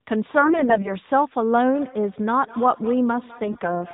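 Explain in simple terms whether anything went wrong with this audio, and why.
Two things went wrong. From 0.38 to 0.93 s, and again from 3.44 to 3.71 s, there are AMR bit errors. Some bits in the phone signal arrived flipped, so the voice turns scratchy and gargly. From 1.74 s to the end there is feedback echo between two devices. One phone replays the other's sound, which gets picked up again, so each phrase comes back faintly about a fifth of a second later.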